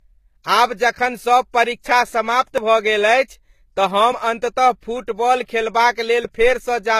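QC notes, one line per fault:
Throughout: transcoding between lossy codecs. The speech carries two layers of damage at once: the artefacts of a very low-rate HE-AAC stage plus Vorbis's own, heard together, with nothing above 14.9 kHz. That stacking separates it from single-codec loss. Likely cause: HE-AAC near 20 kbit/s re-encoded to Vorbis near 61 kbit/s.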